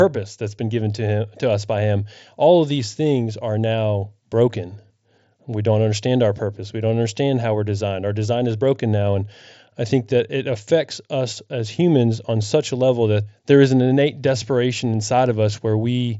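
No technical faults are present.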